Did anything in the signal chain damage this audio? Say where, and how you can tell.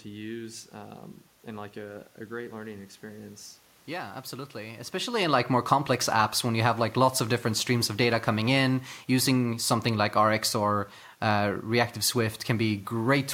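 No, nothing in the chain damaged this speech: the background is room noise picked up at the microphone, and the level change near 5.0 s is the talker moving relative to the mic, both acoustic and neither introduced by any stage.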